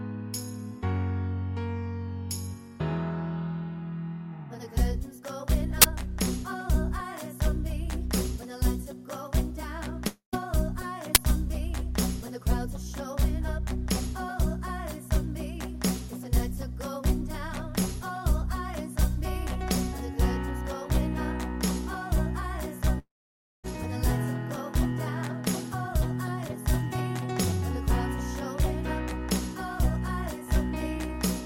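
At 5.82 to 5.84 s there's a short, loud burst of digital noise. That's an uninitialised buffer: a block got played before any real audio was written into it, so whatever junk was sitting in memory came out as samples. The 23 ms length fits a 1024-sample buffer.

From 10.07 to 10.35 s the sound suddenly smears into a fading buzz, drops to near silence, then picks up again a bit further along, about 260 ms later. That's a long network dropout, most likely the stream stalling. The receiver stretched the last bit of sound across the gap, and for roughly the final 120 ms there was nothing left but quiet. Whatever was in that gap is just gone.

At 11.15 s there's another uninitialised buffer, a quick blast of garbage noise lasting about 12 ms. That's shorter than the first one and fits a 512-sample buffer.

The second long network dropout runs from 22.99 to 23.66 s. The same fading buzz trails off quickly, and about 560 ms of the gap is basically dead air. 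When the audio comes back, roughly 660 ms of material has been skipped.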